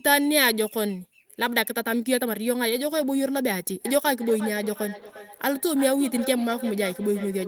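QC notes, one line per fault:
3.85–7.48 s feedback echo between two devices: speech recurs roughly every 0.4 s at about -13 dB, looped through a second device, showing evenly spaced ghost copies on the spectrogram.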